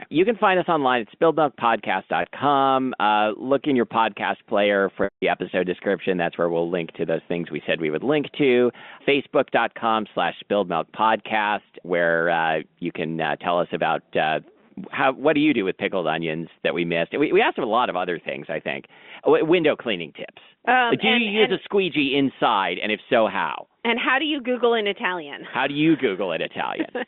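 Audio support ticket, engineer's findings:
Packet loss with pitch repetition, 2.22–2.24 s: brief buzzy hold, 20 ms gap, fits one lost packet. 5.04–5.22 s, after "in your podcast player": 180 ms gap. Repeated pitch period fades to silence, then cross-fades into "episode description", over a 200 Hz–3.6 kHz G.711 line band.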